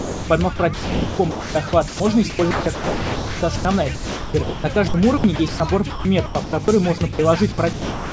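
The clip opens with sound dropped by the voice detector, from 0.0 to 0.29 s. The sender's detector likely judged the opening sound to be background and stopped sending. The receiver filled the gap with comfort noise. Nearly all of that stretch is lost. It gives way to steady noise or near silence before the real sound begins.

Sound chopped by the voice detector follows in six stretches: 0.56 to 2.0 s, 2.3 to 3.65 s, 3.95 to 5.6 s, 5.9 to 6.68 s, 6.98 to 7.19 s and 7.52 to 8.12 s. Here the detector switched on and off repeatedly, likely mistaking quieter parts for background. Comfort noise replaces about 0.9 s, 0.99 s, 0.9 s, 0.36 s, 90 ms and 0.45 s of each stretch in turn. The sound breaks up into choppy fragments. Through all of this, nothing is heard above 8 kHz, which fits a G.722 call path at 64 kbps.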